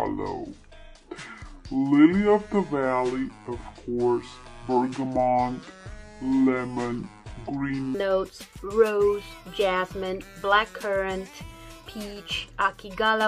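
From 0 to 7.9 s a section at the wrong speed, likely from a clock mismatch, drags at 0.642x and sits about seven semitones low. On a spectrogram its harmonics jump upward at 7.9 s.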